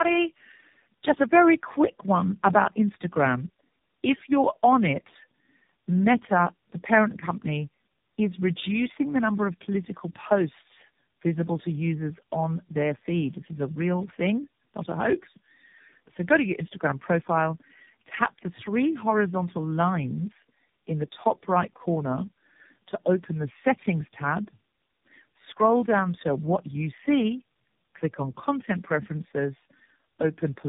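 Throughout, the speech carries tandem speech coding. Its roughness, muffling and warble point to three low-rate speech codecs in a row, each re-coding the previous one's degraded output. A spectrogram shows nothing above 3.8 kHz and smeared, blotchy harmonics.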